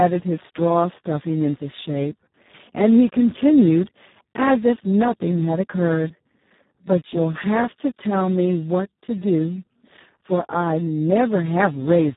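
Heavy Speex codec compression runs through the whole speech clip, with a very low setting that fits a bitrate near 4 kbps, which leaves too few bits for the excitation signal. The speech sounds hoarse and noisy, and nothing is present above 3.8 kHz.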